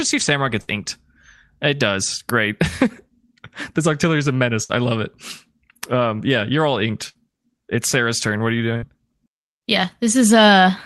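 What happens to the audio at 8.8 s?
A burst of packet loss hits from 8.77 to 8.85 s. The receiver covers about 52 ms by extending the last speech sound and fading it down, heard as a brief held, decaying smear, then playback resumes with roughly 60 ms of speech skipped.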